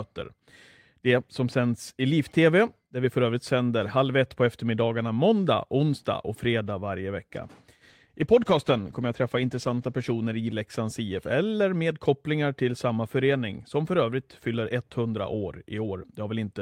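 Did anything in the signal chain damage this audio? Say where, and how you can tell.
Yes. A call bitrate drop hits the speech from 7.9 s to 10.77 s. The cause sits between the network and the codec. Bandwidth estimation fell, so the encoder was told to spend fewer bits. The speech turns coarser and rougher there, with the worst stretch lasting about 2.1 s. The change in texture fits a step from 32 kbps down to 15 kbps. Detail returns once the rate recovers near 10.8 s.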